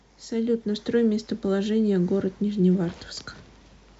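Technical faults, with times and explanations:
Nothing in the speech stood out as a technical problem on listening.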